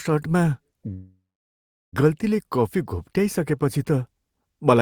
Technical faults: call audio freeze

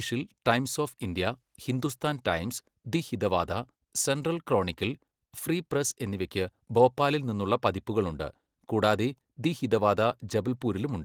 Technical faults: none

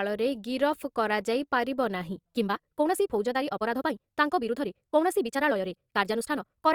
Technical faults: time-stretched section

